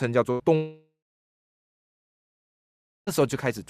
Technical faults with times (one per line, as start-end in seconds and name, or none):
0.31-0.41 burst of packet loss
0.55-3.09 long network dropout